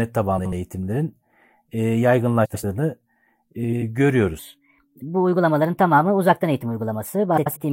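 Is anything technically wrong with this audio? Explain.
Yes, two kinds of fault here.

Frames out of order hit at 0.38–0.53 s, 2.45–2.64 s, 3.63–3.83 s and 7.37–7.57 s. In each, two adjacent blocks (about 70 ms each in the first, 93 ms in the rest) got swapped, so the halves play reversed: a garbled flutter, but no time lost.

There's also a section at the wrong speed from 4.39 s to the end. It runs about 1.22 times fast, pitching everything up roughly three semitones, so the speech sounds higher and hurried. The likely cause is that stretch being played against the wrong clock.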